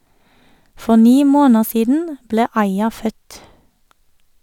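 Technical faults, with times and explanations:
No technical faults can be heard in this speech recording. There is nothing here that needs a time or an explanation.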